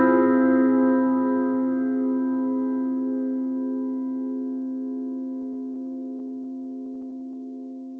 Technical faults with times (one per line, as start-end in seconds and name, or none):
5.42-7.35 repeated stalls (stutter)
7.38-7.97 jitter buffer slow-down